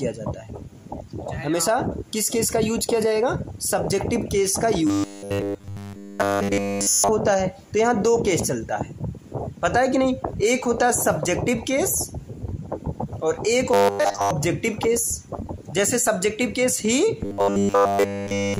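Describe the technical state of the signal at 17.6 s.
At 17.6 s the sound has a robotic quality from repeated short buffers, running from 17.21 to 18.59 s. All of it is a rigid metallic buzz fixed at 100 Hz, likely from a roughly 10 ms chunk looping while new audio is skipped. Unlike a stutter, the repeats fuse into a steady buzz.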